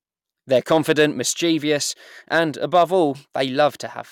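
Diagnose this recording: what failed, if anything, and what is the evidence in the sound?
Hard clipping occurs three times in this speech: from 0.55 to 1.05 s and from 2.34 to 2.39 s, each overdriven by about 3 dB, and from 2.75 to 2.83 s by about 2 dB. Peaks exceeded what a gain stage, most plausibly the converter input, could pass, so they were sliced flat. The result is crackle on loud syllables. On the waveform, the tops are flattened. On a spectrogram, broadband harmonic streaks reach far up the spectrum during those spans.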